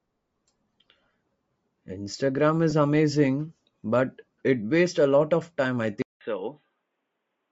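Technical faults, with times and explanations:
Throughout: Bluetooth LC3 compression, likely. The speech carries a plainly audible breathy, grainy edge in the upper range, the sign of a transform codec running lean on bits, which fits LC3 at around 32 kbps with 10 ms frames. At that rate much of the upper spectrum is discarded and refilled with noise, so sibilants and consonant detail come back hashy rather than crisp, and the top end lacks real definition.
2.70 to 2.73 s: lost LE Audio frames. A 20 ms gap, two 10 ms frames, falls just before "amazing but". Rather than a clean dropout, the decoder bridges it by repeating the last good spectrum with randomised phase signs, so the speech at that point briefly turns into a short noisy smear instead of clear tone. The loss is too brief for the concealment to fade out, so no silence is heard.
6.02 s to the end: input switched to a poorer device, likely a change of microphone or a move to a headset's call profile. 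After "lot of time I" there is a silence of about 188 ms, then the speech returns dull and boxy with nothing above 3.9 kHz, as a narrower-band path would pass. The level drops by roughly 5 dB, and a new background noise floor appears, roughly 55 dB below the speech.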